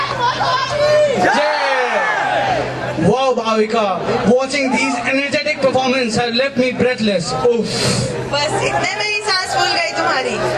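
Nothing stood out as a technical fault anywhere in the recording on listening.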